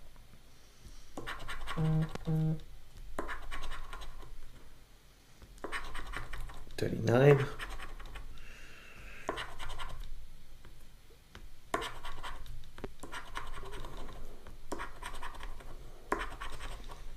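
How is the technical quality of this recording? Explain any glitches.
Two loud pops break into the audio, at 2.15 to 2.18 s and 12.84 to 12.87 s. Each is a single sharp pop standing well above the sound, roughly 15 and 10 dB louder. A sudden voltage spike, likely from a switch, plug or static, is the cause. The sound continues underneath.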